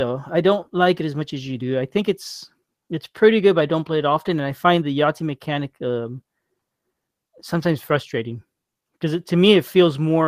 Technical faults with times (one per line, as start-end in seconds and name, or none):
0.00-10.28 clock drift between sender and receiver
0.03-10.21 repeated timing corrections